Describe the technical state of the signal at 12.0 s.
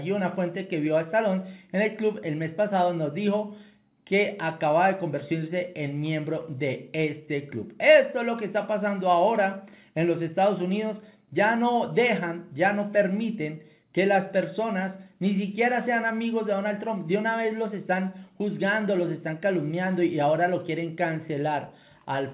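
At 12.0 s the audio is intact, with no fault at that moment, only the steady narrowband character of the call path, which has nothing above 4 kHz and fits a G.711 mu-law codec at 64 kbps.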